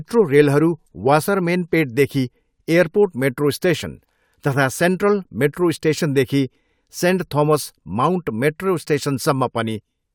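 Nothing in the speech stood out as a technical fault on listening.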